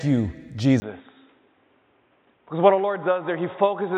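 At 0.8 s the sound drops out for 20 ms. It then turns dull and boxy to the end, with nothing above 3.8 kHz. It is roughly 5 dB quieter, over new noise about 40 dB down. The input was likely switched to a poorer device.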